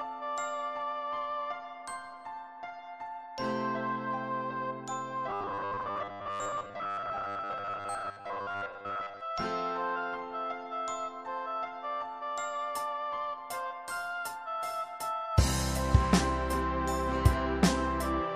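From 5.29 to 9.21 s, robotic sound from repeated short buffers: a rigid 100 Hz buzz, likely from replaying 10 ms buffers that stand in for most of the missing audio.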